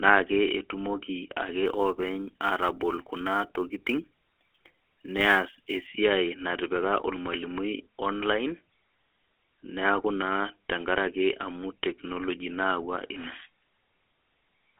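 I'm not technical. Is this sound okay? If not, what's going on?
No. The whole recording has passed through the GSM full-rate codec, an old mobile phone speech system. It rebuilds the voice from a simple model driven by regular pulses. That gives the speech a buzzy, gravelly roughness you can plainly hear. It also throws away everything above about 3.8 kHz, so the sound is narrow and muffled, like a phone call. Crisp sounds such as s and f lose their sharpness.

From 1.66 to 5.87 seconds there is also sample clock jitter. The clock that times each sample was unsteady by a few millionths of a second, so samples landed slightly early or late. Those timing errors turn into a hiss or grain. It is strongest when the speech is loud or bright, and it drops away in the pauses. After 5.87 seconds this extra roughness stops.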